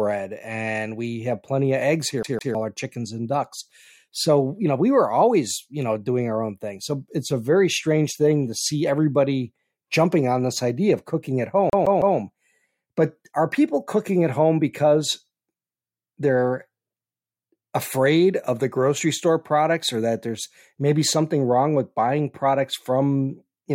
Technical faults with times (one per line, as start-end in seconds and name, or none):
2.23-2.55 CD stuck on one turn
11.70-12.17 CD stuck on one turn